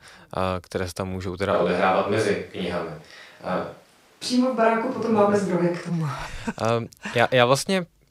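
A switch to a distant microphone runs from 1.55 s to 5.89 s, right after "se tam můžou teda". The speech abruptly turns roomy and hollow with thinner bass while the level holds about steady and background noise stays far below it, then snaps back. The close microphone's signal likely dropped out.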